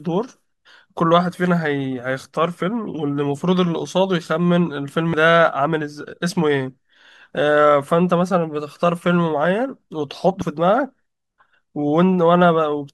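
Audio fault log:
5.14 s and 10.42 s: damaged data in a compressed stream. Corrupted bytes in the encoded speech stream make the decoder misread those frames and lose sync until it finds the next valid frame header, leaving a brief chirp or blip each time.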